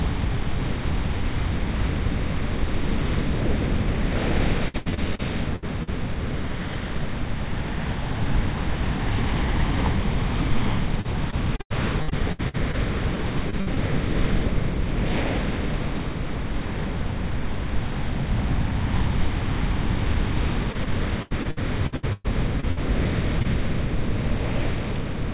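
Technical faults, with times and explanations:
4.68–5.89 s, 11.01–13.78 s and 20.72–22.79 s, repeated packet loss (robotic sound): in each stretch, packets kept arriving too late or not at all, leaving 7, 13 and 10 holes, the longest about 78, 90 and 116 ms. The receiver bridged each hole by extending the last sound, so the audio turns choppy, with fragments dropped. On a spectrogram, patched spans show smeared, repeated harmonic bands ending in abrupt edges. The waveform shows stuttering, copied segments.
23.39–23.46 s, short concealed packet loss: two back-to-back 20 ms blocks, at 23.39–23.42 s and 23.42–23.46 s, never reached the decoder in time. The receiver filled them by continuing the preceding sound, then faded back into the real signal, heard as a brief smear or wobble. A spectrogram shows a short, blurred slice with softened transients, all below the 4 kHz ceiling of the call path. 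The waveform shows a smooth, slightly repetitive patch where detail should be.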